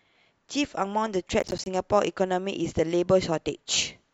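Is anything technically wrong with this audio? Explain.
Yes. From 1.40 to 1.66 s the speech is torn by a burst of processor overload crackle: the processor repeatedly misses buffer deadlines, each miss dropping roughly 10 ms to silence with hard edges. About ten gaps cluster tightly and stop when the load passes, unlike a single isolated dropout.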